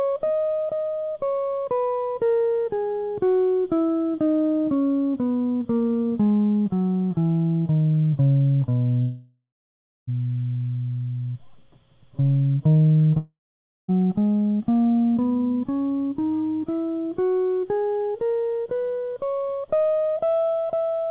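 At 9.02 s the music smears into a fading buzz, falls silent, and resumes at 10.09 s with about a second missing. The same happens from 13.17 to 13.90 s. Both are most likely long network dropouts: the receiver extended the last sound until it ran dry. The band stops near 4 kHz, which fits a G.711 mu-law call path.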